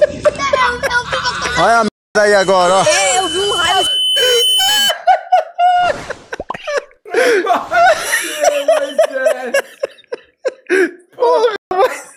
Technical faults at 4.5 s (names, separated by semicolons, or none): loudspeaker feedback squeal